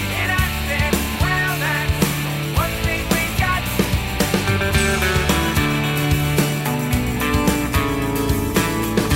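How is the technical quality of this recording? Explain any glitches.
No glitches turn up anywhere in this one, so there's nothing to explain and you can just sit back and listen.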